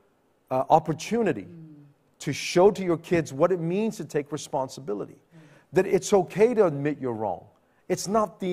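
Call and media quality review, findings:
Nothing to flag on this speech recording; no faults turned up anywhere, so there's no component to chase and the ticket can be closed.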